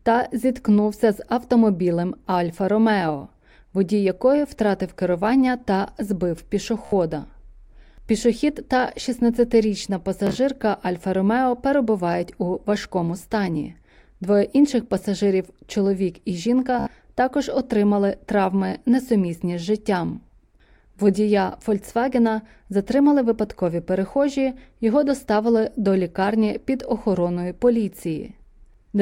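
Three times the wireless link dropped roughly five packets of this speech, and the receiver replayed its last slice to fill the gap. This Bluetooth stutter sounds like a brief buzzing repeat, about 73 ms long, at 6.85 s after "втратив керування та збив", at 10.27 s, and at 16.79 s before "також отримали травми несумісні". At 10.27 s it is scattered across 0.12 s.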